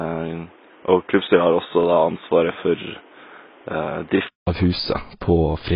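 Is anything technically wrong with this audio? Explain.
Yes, there are two problems here, and they overlap for most of the clip.

The first runs from the start to about 4.47 s and sounds like an input switched to a poorer device. The speech is duller and boxier, with nothing above 3.8 kHz, about 5 dB quieter, and sitting on background noise roughly 30 dB down. At 4.47 s there's a 200 ms silence before the fuller sound returns. That pattern likely means the system was on a narrower-band mic or a headset call profile and then changed back.

The second is there the whole way through, and it's most likely AAC compression. Nothing gets past 5 kHz, and the speech has that smeared, warbly, fizzy edge, especially on sibilants. The damage is heavy, which points to a very low AAC-LC bitrate, around 16 kbps. At that rate the encoder lowers its cut-off and starves or noise-fills bands it can't afford to code properly, and that's why the top end and the consonants sound so rough.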